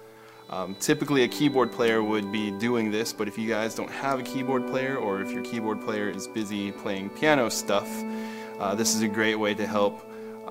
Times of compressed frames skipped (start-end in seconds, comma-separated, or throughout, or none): none